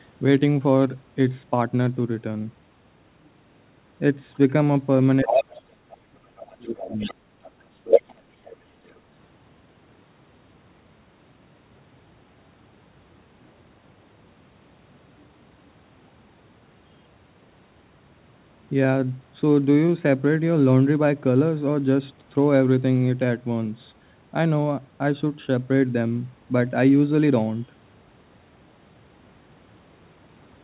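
From 5.22 to 7.17 s the talker's speech sinks deeply, roughly 35 dB at worst. This is speech suppressed in double talk, likely the echo canceller turning down both voices while they overlap.

Overlapping that dip, the other side's voice leaking through is heard at 5.27–5.64 s at about the talker's level and at 6.83–7.14 s somewhat quieter; after the dip, at 7.71–8.21 s, it is slightly louder. Faint scraps also appear at 7.44–7.51, 8.44–8.56 and 8.85–9.18 s. This is likely loudspeaker echo the canceller failed to remove.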